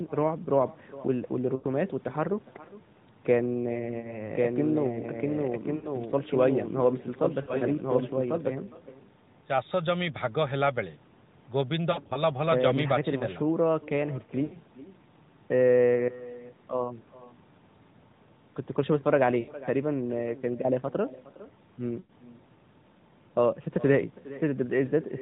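Throughout the speech, an echo with no canceller returns the talker's own sound about 20 dB down and roughly 0.4 seconds late. A far-end loudspeaker is feeding a microphone with nothing removing the pickup, so every phrase trails a faint, thin copy.

Lost AMR speech frames break up the audio at 1.56–1.66, 4.00–4.21, 5.76–5.89, 7.42–7.69, 11.92–12.23, 14.44–14.58, 19.40–19.53 and 22.00–22.12 s. Frames failed on the radio link, and the AMR-NB decoder filled the gaps by repeating its last good parameters at falling gain. This produces drawn-out, fading warbles lasting 40 to 140 ms, and the sound returns rough for a moment. At 7.42 and 11.92 s the losses are scattered, with runs of at most 60 ms. All of this sits inside the narrowband band, which cuts off at 4 kHz.

From 4.35 to 8.51 s a doubled audio track appears: a full-band second copy about 5 dB quieter runs about a second behind, with no room colour, and it cuts in and out abruptly. 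The likely cause is a second, slower capture path mixed in with the main one.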